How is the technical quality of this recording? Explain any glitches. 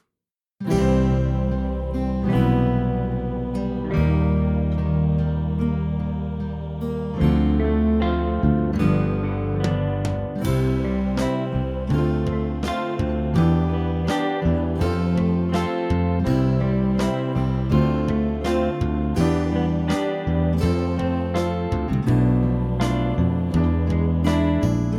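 No glitches turn up on listening, with nothing standing out as a technical fault anywhere in the recording.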